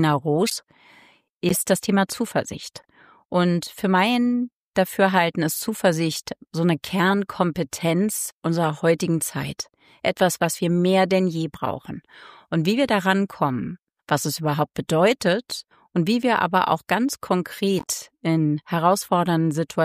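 The audio has six short bursts where corrupt frames were decoded, at 0.47–0.52, 1.49–1.59, 2.77–2.85, 10.43–10.45, 14.66 and 17.79–17.90 s. Each one is a chirpy blip or noise spurt lasting a few frames. Bit errors in the compressed data scrambled the gains and codes, and the decoder played those frames anyway, putting energy at the wrong frequencies. The bursts around 1.5 and 0.5 s are the loud ones, peaking around -5 and -10 dBFS, while the one at 14.66 s is barely there.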